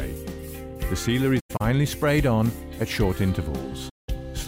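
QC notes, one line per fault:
1.39–1.62 s, AAC frame loss with muting: about 150 ms of sound goes missing in broken pieces across about 0.21 s, the longest gap about a tenth of a second. The decoder zeroed the lost frames' spectrum, and the overlapping windows taper each gap's edges. A spectrogram shows full-band blank columns with soft edges, and the waveform envelope fades smoothly to silence.
3.89–4.08 s, AAC frame loss with muting: a single muted stretch of about 190 ms, which fits roughly nine consecutive lost frames. Window overlap fades the sound out and back in. A spectrogram shows one wide empty full-band column with tapered edges, and the waveform shows a smooth dip to flat silence.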